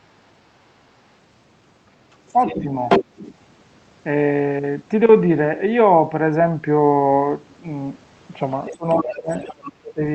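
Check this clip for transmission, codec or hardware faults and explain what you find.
Two echo-canceller faults show up in this speech: a second voice leaking in, and the main talker being pushed down while both voices overlap.

Other side's voice leaking through, 2.12 to 2.62 s, 2.89 to 3.34 s and 8.66 to 9.55 s: a second voice sits behind the talker, about 10 dB down in the first and last stretches and roughly as loud as the talker in the middle one. The likely cause is the far end's voice playing from a loudspeaker into the microphone, with the echo canceller failing to subtract all of it.

Speech suppressed in double talk, 2.59 to 2.7 s, 8.7 to 8.86 s, 9.04 to 9.3 s and 9.53 to 10.02 s: the talker's level sags, only slightly (about 5 dB) near 2.6 s, but in deep gaps of about 25, 20 and 30 dB late in the clip, the last lasting about half a second. This likely comes from the canceller, unable to tell the local voice from the echo, attenuating everything at once.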